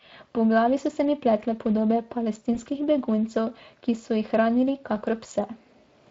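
From the start, the whole clip carries Speex codec damage, and it is plainly audible. Speex is a CELP speech coder. It models the voice as a filter driven by a coded excitation. Here that excitation is coarse. The speech sounds rough, grainy and hoarse throughout. The degree of damage fits a middle bitrate of around 20 kbps.

At 2.53 s, just after "se mi pletle podobe", packet loss concealed by the speech codec appears, lasting until 2.56 s. About 20 ms of audio went missing, which fits a single lost frame. The decoder filled the gap by repeating its last pitch and filter with falling gain. The result is a brief buzzy tone or coloured noise that fades. The speech then sounds weak or distorted for a few tens of milliseconds as the decoder recovers.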